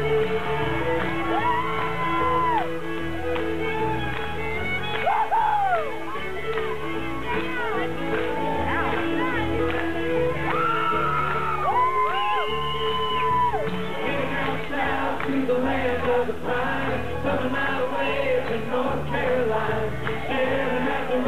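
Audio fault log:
7.52 s and 15.89 s, dropped samples: each moment carries a single sharp click. The likely cause is a handful of samples vanishing from the stream, a fraction of a millisecond, so the waveform jumps abruptly to a later value without removing any audible sound.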